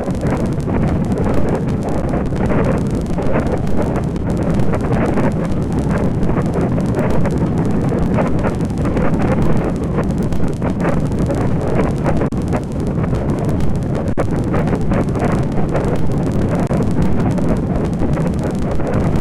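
The output buffer ran dry five times and the converter held its last sample until data resumed, flattening the waveform so the audio briefly freezes: at 2.02, 4.18, 12.28–12.32, 14.13–14.18 and 16.67–16.70 s. Each underrun with held sample lasts 12 to 46 ms, with lengths that fit 512-, 1024- and 2048-sample buffers. Playback then continues where it stopped, so each gap ends softly rather than with a click.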